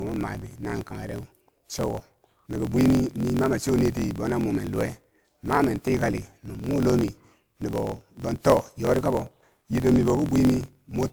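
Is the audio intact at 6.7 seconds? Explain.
No. At 6.7 s you're in the middle of two faults that run through the whole clip. First, a block size mismatch (truncated): one stage writes bigger blocks than the next reads, which fits 1024-sample reads, and each block's tail gets dropped. That gives a steady 43.1 Hz buzz, and the speech runs 1.12 times fast at roughly normal pitch.

Second, the sound is swirly, smeared and hollow, with blurred attacks and nothing above 20.2 kHz. That's more damage than one 128 kbit/s pass should cause. The likely cause is generation loss: the audio was encoded a few times over, apparently with WMA, and each pass added fresh quantisation noise and spectral holes.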